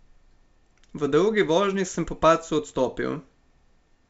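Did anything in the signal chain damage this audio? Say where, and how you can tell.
No; the 64 kbit/s G.722 coding sounds as intended.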